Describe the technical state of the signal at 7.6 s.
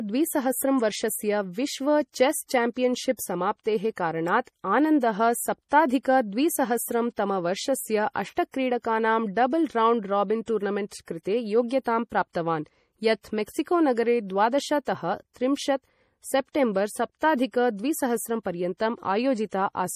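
At 7.6 s the speech carries plainly audible MP3 compression damage, present throughout the clip. The sound is watery and swirly, with metallic chirps on s sounds and smeared attacks, which fits a low bitrate around 40 kbps. The likely mechanism is an encoder short of bits zeroing weak frequency lines frame by frame and cutting the treble. A spectrogram would show a flat ceiling at 15.2 kHz and speckled, flickering gaps in the upper bands.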